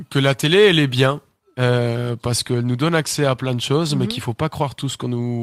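At 3.41 to 3.47 s, after "nous donne accès à", a lost packet rebuilt from error correction: two packets' worth of speech, about 40 ms, plays as rougher, noisier low-bitrate copies with no gap.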